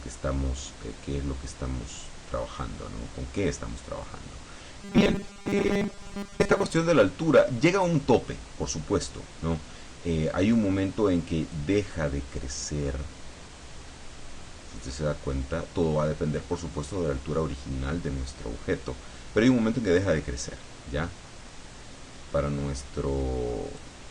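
From 4.82 to 6.72 s, robotic sound from repeated short buffers. A 200 Hz metallic buzz replaces most of the audio, likely from repeating 5 ms chunks.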